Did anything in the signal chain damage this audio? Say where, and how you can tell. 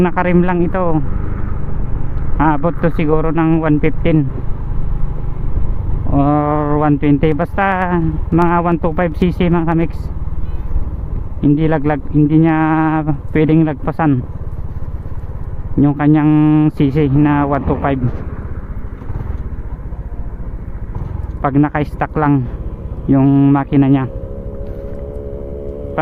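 Yes. Between 7.22 and 9.82 s there are periodic USB or driver dropouts at the driver or buffer stage. Regular ticks repeat every 0.1 s, about 30 in all. Each is a tiny skipped slice, roughly a tenth of a millisecond, cut when a background task stalled the audio path.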